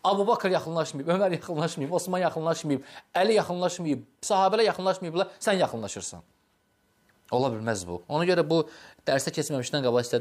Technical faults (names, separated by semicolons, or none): none